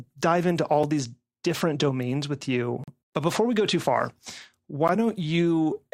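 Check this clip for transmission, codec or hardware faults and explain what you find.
The speech has a gap between stream segments, repeating every 2.0 s: a 3.7 ms hole at 0.83 s between "dive into all" and "these different domains with", 40 ms from 2.84 to 2.88 s after "these different domains with", and 12 ms at 4.88 s. Mismatched segment timestamps leave spaces that play as silence. The hard-edged silences at 2 s intervals slightly lengthen the speech instead of dropping any of it, which distinguishes them from packet-loss dropouts.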